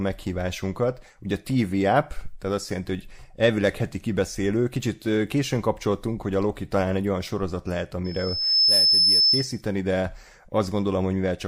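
From 8.04 s to 9.62 s a piercing tone near 5.3 kHz swells over roughly half a second and then sits about 10 dB above the speech. This is loudspeaker feedback squeal: the microphone picked up its own loudspeaker, and at that frequency the loop gain exceeded one, so the tone kept reinforcing itself.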